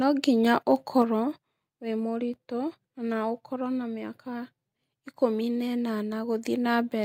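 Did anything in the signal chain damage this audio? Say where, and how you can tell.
Yes. Between 0.71 and 0.74 s the loudest part of the speech turns briefly harsh and crackly, with the waveform tops flattened instead of rounded. The most likely cause is microphone overload at the converter stage: the input level was set so high that peaks ran about 1 dB past full scale, and roughly 2 percent of samples in that short span were cut flat. The squared-off tops add the brittle edge you hear.

About 0.3 s later, at 1.02 s, the speech and the room sound behind it drop together in one step, about 4 dB quieter from then on. Because the drop follows so closely on the distorted peak and is a single clean step rather than a gradual change, it is likely the microphone volume stepped down by the call processing. The software reacts to the clipping by cutting the device's input gain once.

At 2.34 s there is a short low thump, a DC step at the converter or analogue input. 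The waveform's zero line jumps suddenly while the speech continues unaffected. The offset then sinks back toward zero, following the slow curve of a high-pass filter near 5 Hz. The abrupt jump carries low-frequency energy that the ear hears as a thud, and the slow return adds nothing audible beyond it.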